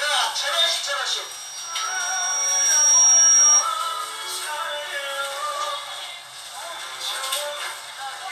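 From 1.10 to 3.69 s, a loudspeaker feedback squeal rises at 5.7 kHz. The microphone re-amplifies its own loudspeaker output, so that single tone swells over roughly two seconds to about 15 dB above the audio. A steady interference whine would hold a constant level instead of growing.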